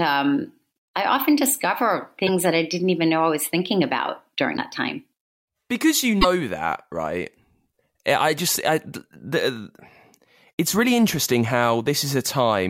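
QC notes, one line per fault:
2.26–2.29 s, 4.56–4.59 s, 6.21–6.25 s: broken MP3 bit reservoir. Each is a brief 28–44 ms glitch, roughly one 26 ms frame or slightly more, likely from frames decoding borrowed bits from the wrong data after a cut. On a spectrogram, each appears as a narrow vertical break in the speech pattern. On a waveform, each appears as an abrupt discontinuity.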